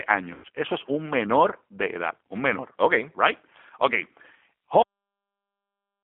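G.729 codec, throughout the clip: The whole recording has passed through an 8 kbit/s G.729A link. It carries only a narrow telephone band, from roughly 250 Hz to 3.5 kHz, so the speech sounds thin and boxy. The decoder rebuilds each 10 ms frame from a vocal tract filter, a pitch predictor and a handful of pulses rather than the actual waveform. That modelling leaves a plainly audible rough, synthetic grain on every syllable.

VoIP packet loss concealed by the speech codec, from 0.34 to 0.46 s: About 100 ms of audio never arrived, which fits ten consecutive 10 ms frames going missing. The decoder covered the hole by repeating its last pitch and filter settings with the gain stepping down each frame. The speech there smears into a stretched, fading sound instead of falling silent. Because every frame depends on the one before it, the sound stays weakened and distorted for a short while after real packets resume.

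Cut-off end, at 4.82 s: The audio stops abruptly mid-sound and drops straight to digital silence for the rest of the file, with no natural decay. The final stretch of buffers was never written out or played, so playback simply ends wherever the data ran out. The sudden break can leave a small click at the cut point, and the silence that follows has no room tone.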